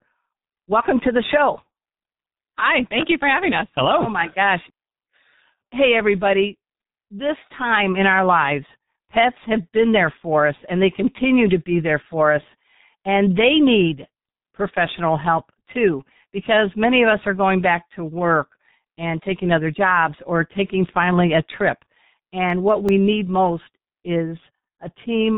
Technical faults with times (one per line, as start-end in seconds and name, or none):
0.00-25.37 G.723.1 codec
22.50-23.08 CD scratch ticks